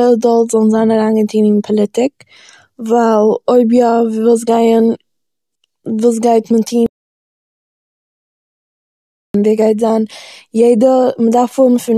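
At 6.86 s the speech cuts out mid-flow. This is an audio dropout to silence. From 6.86 s to 9.34 s, about 2.48 s, there is nothing at all. No room tone or hiss remains, just silence. The speech then returns abruptly. The input was likely lost for that stretch, through a broken link, a disconnected device or a mute, while recording carried on writing silence. Whatever was said in the gap is gone.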